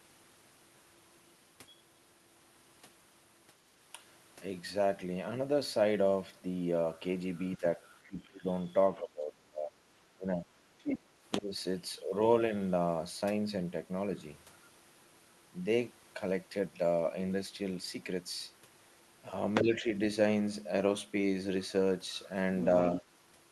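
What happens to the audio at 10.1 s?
At 10.1 s the speech is caught in speech suppressed in double talk, running from 8.99 to 10.51 s. The echo canceller likely mistook the overlap of both talkers for loudspeaker echo and pulled down the near-end voice along with it. The speech sinks and breaks up in pieces for about a second in total within that span, at its deepest dropping by about 25 dB, before recovering after 10.51 s.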